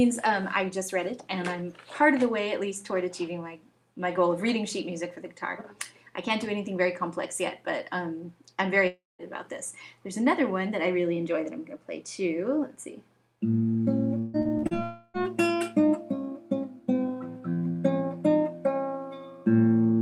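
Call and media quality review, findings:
Long network dropout, 8.87–9.22 s and 14.83–15.17 s: audio likely stopped arriving for about 0.32 s each time. Concealment extends the last sound as a fading buzz; the first gap ends in about 0.19 s of silence, the second is bridged almost entirely.

Repeated packet loss (robotic sound), 14.19–14.74 s: jitter buffer starved by five gaps, longest 150 ms, with about half the span synthesised by concealment. Choppy texture with missing fragments, running straight into the second dropout.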